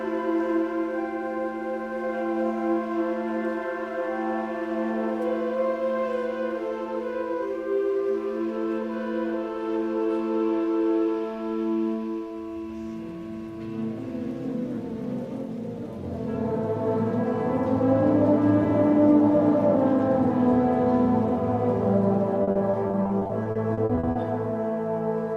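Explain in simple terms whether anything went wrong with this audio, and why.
From 22.43 to 24.17 s the sound turns choppy and robotic, because of repeated packet loss: many brief dropouts, each patched by stretching the previous sound.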